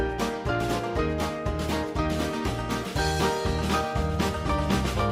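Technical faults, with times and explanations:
No technical faults are present in this clip.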